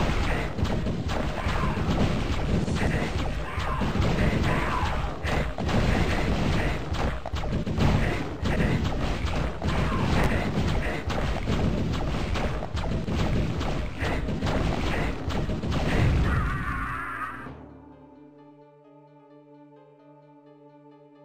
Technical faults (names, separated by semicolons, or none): chunks out of order